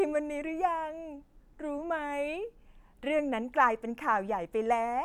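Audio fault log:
No faults heard anywhere in this speech recording.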